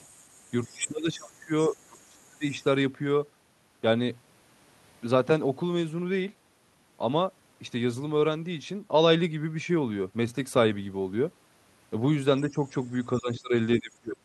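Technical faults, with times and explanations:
0.0 to 2.7 s: other side's voice leaking through. A faint second voice sits under the talker, roughly 25 dB below the main speech. The likely cause is a loudspeaker at the talker's end whose sound the echo canceller did not fully remove.
0.68 to 2.44 s and 13.18 to 14.25 s: speech suppressed in double talk. The talker's voice dips and breaks up. It drops by around 25 dB over about one and a half seconds first, and around 30 dB at the end. Both sides likely talk at once, so the echo canceller turns everything down.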